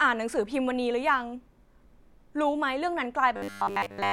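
From 3.36 to 4.12 s the speech becomes a rigid 100 Hz metallic buzz, robotic sound from repeated short buffers, likely one 10 ms chunk looped, not silent gaps.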